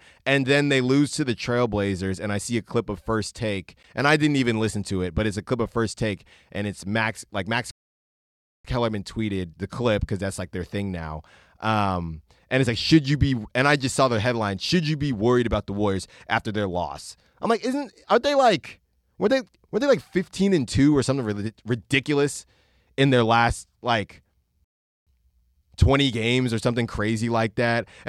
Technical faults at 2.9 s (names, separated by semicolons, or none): none